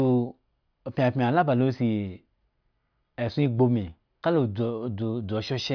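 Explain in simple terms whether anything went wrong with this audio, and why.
Nothing went wrong here: the speech comes through without any glitches, dropouts or odd noises to point to at any moment.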